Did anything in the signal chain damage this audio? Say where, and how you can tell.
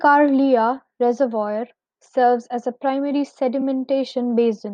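Yes. Repeated frames at the codec or storage stage: just after "serves as a primary", the speech from 3.60 to 3.63 s plays twice, a stutter of about 21 ms. That length fits one compressed frame being duplicated, not a gap or a buffer-sized dropout.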